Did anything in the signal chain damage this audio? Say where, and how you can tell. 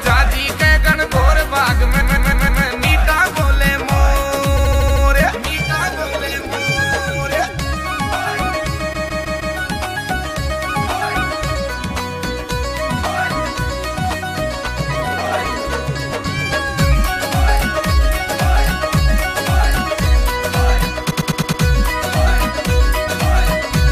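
Yes. The encoded stream carries repeated frames, written or delivered more than once at the codec or storage stage, so the decoder replays the same slice: a 157 ms block four extra times at 2.0–2.63 s and 8.92–9.55 s, a 78 ms block six extra times at 4.56–5.03 s, and a 105 ms block five extra times at 21.10–21.62 s. Each is heard as a rhythmic stutter, and each lengthens the audio by between 0.47 and 0.63 s.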